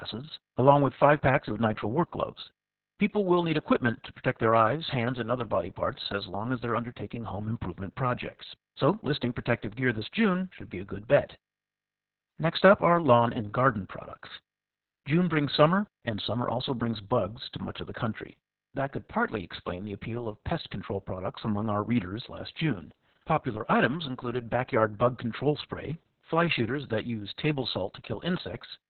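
From start to finish the speech carries heavy Opus voice compression. Nothing reaches past about 4.2 kHz, so the band has been cut to narrowband. That points to a very low bitrate, around 6 kbps, with the SILK linear-prediction coder working alone. At that rate the excitation is coded coarsely. The voice sounds muffled and hoarse, with a slightly robotic edge that stays through the whole clip.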